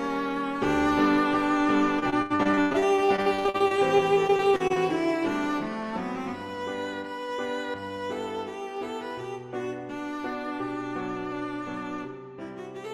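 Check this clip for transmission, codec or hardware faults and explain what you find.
Repeated packet loss affects the stretch from 1.99 to 4.78 s. Over those 2.8 seconds the stream keeps losing packets or receiving them too late, and the receiver patches each hole by extending the last sound it received. Concealment covers about a quarter of the span, and the longest gap runs 96 ms. The dense pattern points to roughly thirty separate dropouts. Because the holes arrive one after another, the audio turns choppy, with pieces missing.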